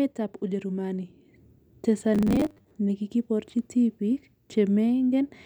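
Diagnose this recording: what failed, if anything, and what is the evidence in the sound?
The audio driver or buffer stage likely ran short of fresh data between 2.15 and 2.71 s, so the software kept replaying its last fragment instead of waiting, leaving robotic sound from repeated short buffers. The repeat rate fixes a steady 100 Hz buzz, which fits a fragment of about 10 ms. Roughly half the sound in that stretch is repetition rather than new audio, so the speech turns into a rigid, metallic drone that only loosely tracks it.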